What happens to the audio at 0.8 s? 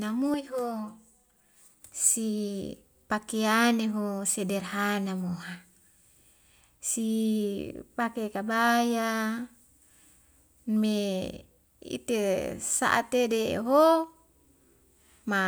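At 0.8 s the speech is inside a stretch of channel delay, or comb filtering, running from 0.34 to 1.82 s and ending just before "si pakiyani ho sederhana". One channel lags the other by about 5 ms, and the two are summed to mono. Content shared by both cancels at evenly spaced frequencies, starting around 100 Hz. The result sounds hollow and phasey, with a fixed set of notches thinning the tone.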